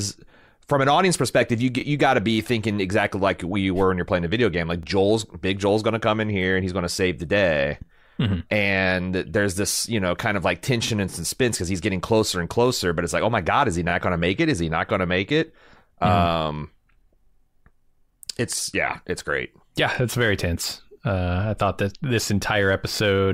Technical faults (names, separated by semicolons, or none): overlapping chunks